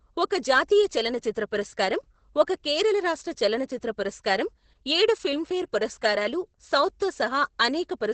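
Opus voice compression affects this entire speech clip: nothing above 8.7 kHz, and coarse linear-prediction coding sounds muffled, hoarse and slightly robotic, fitting a 10 kbps stream.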